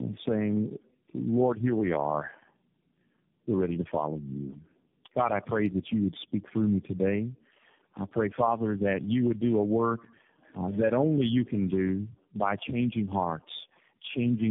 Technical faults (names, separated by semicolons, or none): tandem speech coding